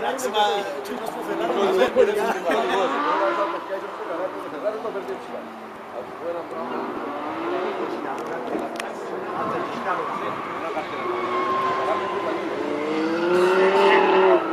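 Dropped buffers (overrun) at 1.88, 5.76 and 6.97 s: each is a small forward jump, likely from samples overwritten before collection, losing about 10 ms.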